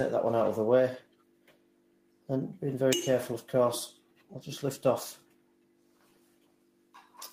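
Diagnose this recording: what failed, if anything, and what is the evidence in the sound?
The sound pumps and thins, with held parts sinking by roughly 10 dB while attacks pass. A speech noise suppressor in call processing was applied to music or sounds.

Sound cut by the noise suppressor drops about 11 dB at 1.0 to 2.29 s, 3.93 to 4.33 s and from 5.17 s to the end, where steady, fading sound was mistaken for noise.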